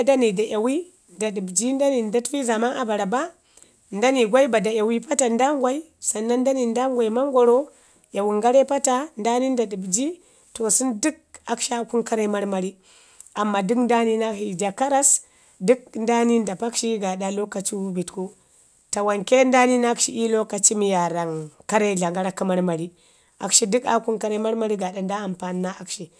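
No technical faults can be heard anywhere in the speech recording.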